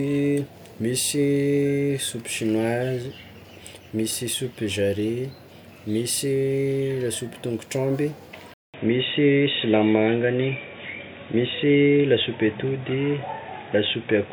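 After "lasopy tôngotr'omby" at 8.54 s, a 200 ms gap leads into boxy sound capped at 3.8 kHz with fresh faint hiss, likely an input switched to a poorer device rather than simple filtering.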